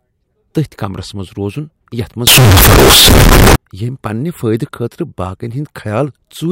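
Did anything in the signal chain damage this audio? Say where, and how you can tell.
Yes. From 2.27 s to 3.56 s the speech turns abruptly very loud and harsh, with a buzzy, almost square-wave quality at an almost fixed, high level, and the background noise comes up as loud as the voice, though the pitch can still be followed. That points to the sample-format conversion stage, likely a float read as integer: 32-bit float samples were taken as 32-bit integers, so each value is set mainly by its sign and exponent bits rather than the original level.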